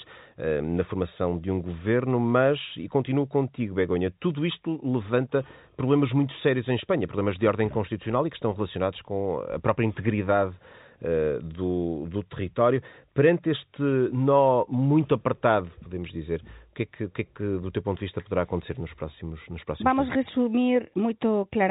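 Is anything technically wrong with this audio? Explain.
No, nothing in this speech recording is technically wrong. It has the narrow sound of G.711 telephone coding, with nothing above about 3.8 kHz, and that band limit is simply how the telephone path works.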